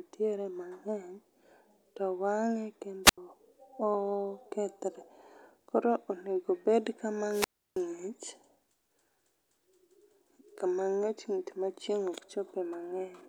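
The analogue FM radio link fades twice and the receiver's squelch mutes the output, a wireless microphone squelch dropout. From 3.04 to 3.18 s, hiss rises before an 84 ms hole of near silence; from 7.29 to 7.81 s, the silent gap stretches to 323 ms before the speech returns.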